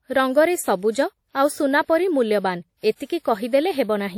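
WMA compression runs throughout the speech, plainly audible as ringing, washy smearing and hiss that breathes with the signal, likely from a simple low-bitrate transform encoder.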